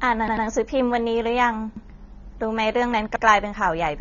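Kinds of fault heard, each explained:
AAC compression: The speech sounds dull and smeared from start to finish, with a warbling, fizzy edge on sibilants and held sounds. Nothing is heard above about 6.9 kHz. A perceptual codec at a low bitrate does this. It drops fine spectral detail it judges inaudible and lowers the top cut-off to save bits. The damage is plainly audible here. The likely cause is AAC-LC coding at around 24 kbps.
repeated buffer: The same short slice of speech plays again with a hard join at each repeat. This happens when fresh audio arrives late and the device replays its last block. Each slice lasts about 93 ms, which fits a 4096-sample buffer. From 0.28 to 0.46 s one slice sounds three times in a row. At 1.77 to 1.86 s and 3.16 to 3.25 s a slice sounds twice. Each heard as a brief stutter.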